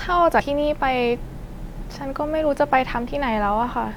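A brief glitch breaks into the speech from 0.40 to 0.42 s, and a second, shorter blip of the same kind lands at 3.07 s. Both are damaged data in a compressed stream: part of the encoded file was wrong at those points, so the decoder misread the affected frames and lost its place until it found the next valid frame header and resumed normal decoding.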